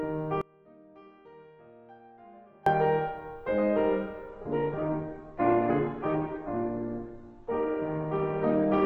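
A music clip with two faults. From 0.41 to 2.66 s the music cuts abruptly to a faint residue about 30 dB down, likely an audio dropout with the path left live; the sudden edges rule out a pause or fade. From 4.29 s to the end, with no gap, nothing remains above 7.2 kHz and codec artefacts thicken, the sound of an adaptive stream switching to a lower bitrate, one that points to a very low Opus rate.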